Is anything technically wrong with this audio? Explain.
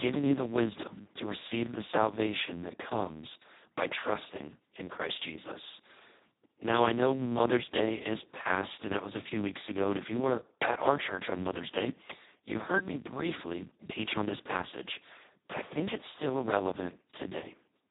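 Yes. Throughout the whole clip the speech sounds hoarse, buzzy and close to robotic, with a rough, noisy grain and no content at all above about 3.9 kHz, so it is dull and narrow. This is heavy Speex codec damage. The CELP coder has almost no bits left to describe the excitation, which points to a very low setting of around 2 kbps. At that rate it behaves nearly like a vocoder, so the natural voicing is replaced by a coarse synthetic buzz.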